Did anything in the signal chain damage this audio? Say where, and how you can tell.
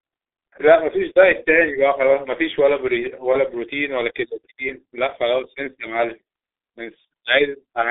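Yes, the codec stage: the speech is muffled and hoarse throughout, with blurred consonants and nothing above 3.8 kHz. This fits heavy G.723.1 codec damage at about 6.3 kbit/s, whose slow-updating 30 ms frames smear detail.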